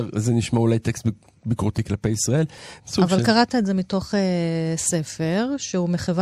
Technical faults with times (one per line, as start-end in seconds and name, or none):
2.58 compressed frames skipped